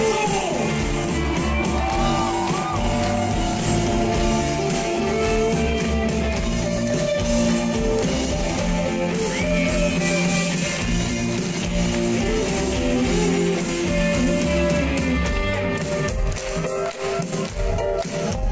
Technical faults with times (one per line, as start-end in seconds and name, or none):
none